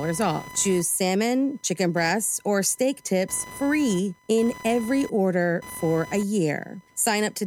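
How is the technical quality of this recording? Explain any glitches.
The quality takes a hit from computer activity noise running through the whole clip: a chirpy buzz pulsing at around 1 kHz, maybe 20 dB under the speech, as the computer's load shifts the shared audio ground.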